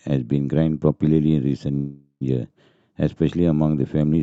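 At 1.75 s the speech stalls into a fading buzz, ending in about 80 ms of silence, then resumes at 2.23 s with nothing lost. This call audio freeze likely came from delayed packets emptying the jitter buffer, inserting a 455 ms gap.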